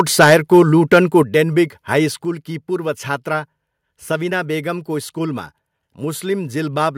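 The microphone input was likely set too high, driving peaks about 8 dB past the converter's limit from 0.0 to 0.62 s, with a few percent of samples flattened. This microphone overload gives the loudest syllables a harsh, crackling edge. It returns at 0.92 to 0.98 s, about 4 dB over but clipping around a tenth of the samples.

The call software, likely reacting to that clipping, stepped the microphone volume down at 0.24 s by about 2 dB, then at 1.23 s and 2.25 s by about 5 dB each. Each step drops the voice and background level abruptly.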